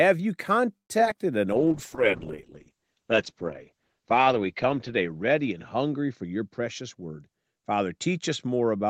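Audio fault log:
0.77–1.16 s, repeated packet loss (robotic sound): Several short holes, the longest 120 ms, are patched by stretching the preceding sound. This makes it choppy.
1.53–8.9 s, call bitrate drop: The sound turns coarse and watery, and the top end disappears above 8 kHz. This points to the encoder falling to roughly 8 kbps.
6.4–7.31 s, jitter buffer speed-up: Speech runs about 11 percent fast at unchanged pitch. About a tenth of a second of pitch-period slices is cut to shrink the buffer.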